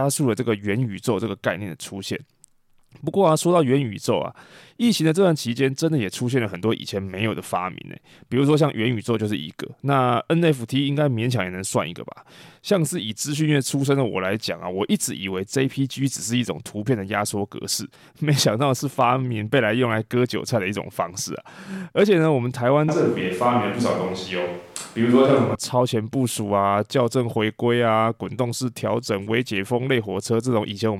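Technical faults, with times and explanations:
22.89–25.55 s, switch to a distant microphone: speech abruptly turns hollow, roomy and bass-light at unchanged loudness, room noise about 30 dB down, then snaps back; the close microphone likely dropped out.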